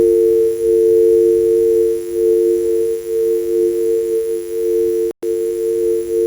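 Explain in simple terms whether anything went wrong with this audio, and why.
Electrical interference from the 50 Hz power supply leaked into the audio path, probably through a dimmer, a power adapter or a poorly shielded cable. This mains buzz sits faintly under the sound for the whole clip as a steady, raspy hum with a gritty edge.

At 5.11 s the sound drops to complete silence for about 0.12 s, then carries on at 5.23 s. This is likely a Bluetooth stall: interference delayed the wireless data, the headphones ran out of audio to play, and playback paused until it caught up.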